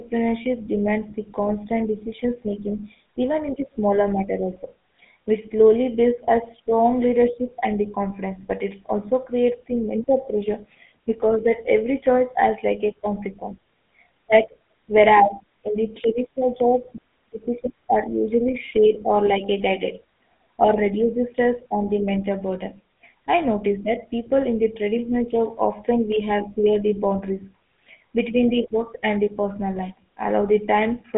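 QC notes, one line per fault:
throughout, GSM full-rate codec: The speech sits in a narrow telephone band of roughly 200 Hz to 3.5 kHz, with nothing at all above 3.7 kHz, and carries a plainly audible buzzy, gravelly roughness, which fits the 13 kbps full-rate coder. The coder rebuilds the voice from a vocal-tract model driven by a sparse, regularly spaced pulse excitation, and that coarse excitation causes the grit. A simple band-limited phone line would sound muffled but clean.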